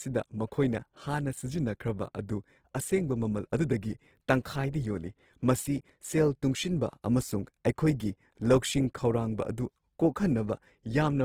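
Throughout the speech, starved bands are filled with noise, leaving a rough, grainy texture that fits likely Opus compression in CELT mode near 16 kbps.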